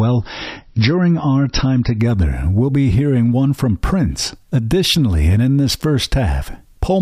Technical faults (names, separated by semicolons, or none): adaptive stream starting at a low bitrate